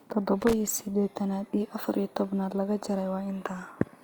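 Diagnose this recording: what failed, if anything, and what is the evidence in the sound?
Analogue wiring: loose connector crackle, an irregular burst of scratching from 0.41 to 0.53 s, as a worn contact chopped the signal on and off.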